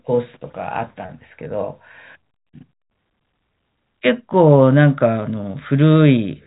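The clip is speech, and nothing is technically wrong with it.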